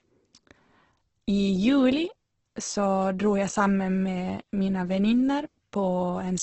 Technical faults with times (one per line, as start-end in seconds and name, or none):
0.00-6.43 Opus compression